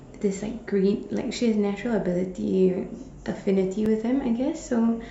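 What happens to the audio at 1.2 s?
Nothing goes wrong at 1.2 s; the speech carries on intact through that moment, with no dropout, click, glitch or other fault to be heard.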